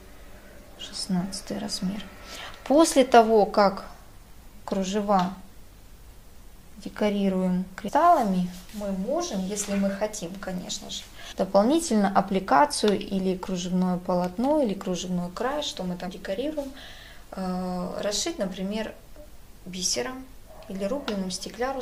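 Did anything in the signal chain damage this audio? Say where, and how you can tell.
Yes. The damage happened at the codec stage, as damaged data in a compressed stream. There are three brief bursts, at 7.87–7.89 s, 11.31–11.33 s and 16.07 s. Each is a short chirp or blip, about 20 ms long, that cuts into the audio. Corrupted bytes in the compressed frames made the decoder misread them and lose sync. The junk it output until it found the next valid frame header is what you hear.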